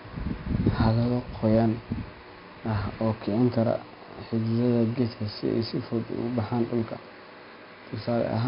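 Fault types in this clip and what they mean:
4-bit ADPCM compression: heavy gritty hiss that swells with speech and drops in pauses, unlike steady noise; nothing above 5.3 kHz, fitting an 11 kHz rate.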